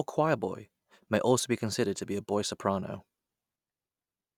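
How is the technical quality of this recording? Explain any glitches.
The technical quality of the recording is sound, and there are no glitches to explain.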